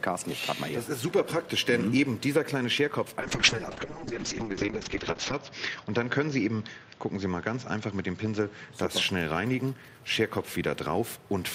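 From 3.21 to 8.79 s there's a call bitrate drop: the audio goes rough and muffled, top end cut from 20 kHz to 8 kHz, consistent with Opus dropping from roughly 64 to 6 kbps, bottoming out for about 2.1 s.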